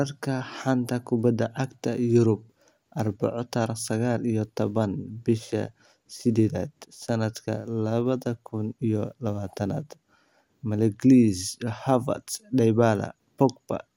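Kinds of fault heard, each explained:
Nothing stood out as wrong on listening to this recording.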